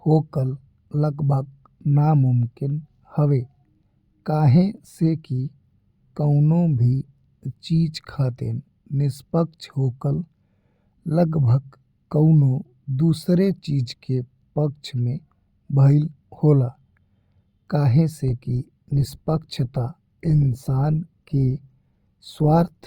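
At 18.28 s the speech suddenly drops in quality with no gap, with more codec artefacts, until the clip ends at 22.86 s. That's an adaptive stream at a lower bitrate, consistent with a step from roughly 64 down to 24 kbit/s Opus after the connection slowed.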